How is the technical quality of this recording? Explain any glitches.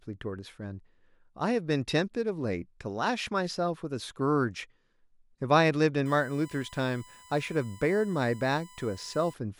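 The recording has one clear fault: USB whine. From 6.06 to 9.34 s, a steady 1 kHz tone sits well below the speech. Current drawn in 1 ms bus frames leaks in through power or ground.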